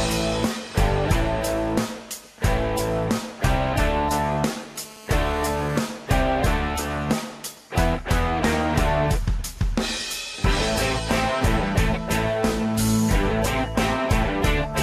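GSM phone buzz runs from 4.76 to 5.86 s: a hard, raspy tone at about 217 Hz with a dense stack of harmonics, sitting about 21 dB below the audio. A 2G handset in a call transmits in bursts at that rate, and the audio circuitry rectifies the radio pulses into a steady buzz.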